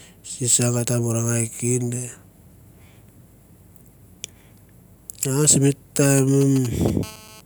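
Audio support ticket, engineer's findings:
GSM signalling bursts, 6.18 to 7.04 s: galloping dit-dit-dit ticks with short 217 Hz buzzes, roughly 15 dB under the speech. A nearby 2G handset sends signalling bursts, rectified in the audio path. Spectrogram shows clustered vertical stripes; the waveform shows spiky groups.

GSM phone buzz, 7.04 to 7.41 s: hard, raspy 217 Hz buzz, about 22 dB below the speech and unrelated to it. A nearby 2G handset is in a steady call transmission, and the input stage demodulates it. Spectrogram shows an evenly spaced harmonic comb from 217 Hz upward; the waveform shows a regular pulse train.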